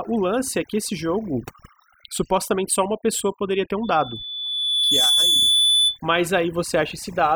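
A speech recording with overdone noise removal throughout: the suppression clamps hard on anything near the noise floor, so the background sits in twinkly near-silence. Right after "pessoa poderia ter um", at 3.83 s, a loudspeaker feedback squeal kicks in. The mic is catching its own speaker, and a 3.5 kHz tone swells over about a second to roughly 5 dB above the speech before dying at 6.01 s.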